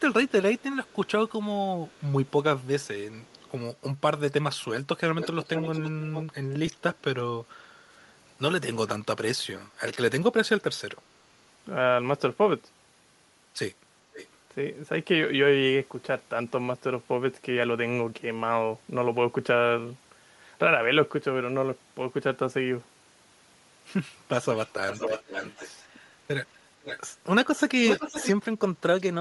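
Throughout the speech there is a breathy, grainy edge on the upper frequencies. That points to Bluetooth LC3 compression, likely at about 48 kbps with 10 ms frames. The codec runs out of bits for the top of the spectrum. It zeroes parts of it and fills the gaps with noise. The damage is plainly audible.

From 0.29 to 3.51 s there is an echo leak. A faint copy of the speech returns about 391 ms late. It sits far below the main sound. The likely cause is a loudspeaker on the far side whose echo canceller let some of its own playback through. A second echo leak runs from 5.09 to 6.25 s, with a delay of about 456 ms. This copy is much louder.

At 6.67 s one LE Audio frame is lost, about 10 ms of audio. The decoder fills the hole by repeating the last spectrum with random signs. It is heard as a tiny noisy smear in the speech.

From 7.39 to 7.96 s the background is gated by the echo canceller. 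The room sound dips by about 9 dB for roughly half a second, then comes back. The canceller pulled the microphone down while it judged the loudspeaker active.

Echo leak returns briefly at 14.13 to 14.28 s, moderately quiet, at 506 ms delay. It comes back strongly from 24.56 to 25.86 s and again from 26.83 to 28.32 s. Both use the same 506 ms delay and are nearly as loud as the speech itself.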